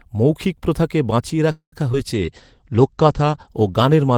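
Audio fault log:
1.51–1.74 s, call audio freeze: Right after "মৌখিক প্রথাকে বাঁচিয়ে" the speech stalls for about 0.21 s. The last sound is stretched into a fading buzz and then about 0.1 s of silence, after which the speech resumes exactly where it stopped with nothing lost. The likely cause is packets held up in transit that left the jitter buffer empty. The receiver extended the final sound until the late audio arrived, which delays everything after this point by about 0.21 s.
1.92–1.95 s, short concealed packet loss: A brief smear or wobble cuts into the speech, and a short sound at that spot may be blurred or swallowed. About 30 ms of audio never reached the decoder in time. The receiver filled roughly 10 ms of the hole by continuing the preceding sound, using its pitch if it was voiced and shaped noise if not, and then blended back into the real signal. The rest of the gap is simply missing.
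2.14 s to the end, call bitrate drop: From here the speech turns coarse and muffled, rough and watery, and the crisp top end disappears. A fall in the estimated network bandwidth made the encoder cut its rate from 32 kbps to 13 kbps, with the lowest rate lasting about 1.3 s. At that rate Opus quantises more crudely and narrows the audio band from 20 kHz to 8 kHz. The dull, lo-fi quality comes from that lost treble and the coarser coding.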